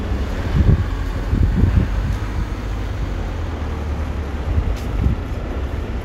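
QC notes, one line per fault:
No faults found in this recording of sounds. Nothing here calls for a timed entry.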